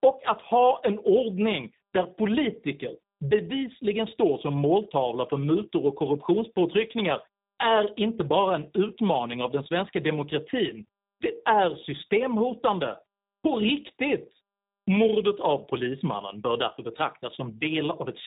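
From start to finish the speech carries tandem speech coding. Two speech codecs in succession each re-encode the previous one's degraded output, which fits a G.726 stage feeding G.729A at 8 kbit/s. Nothing sits above 3.8 kHz, so it sounds muffled, rough and warbly throughout.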